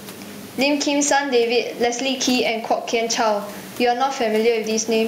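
Speech, with gain pumping throughout. The room noise sits about 32 dB below the speech, and the gain swings by around 15 dB. Loud and quiet passages sit unnaturally close together, giving a squashed, breathing quality. The likely cause is microphone gain set far too high, with a fast limiter or compressor clamping down on each loud sound and releasing in the pauses.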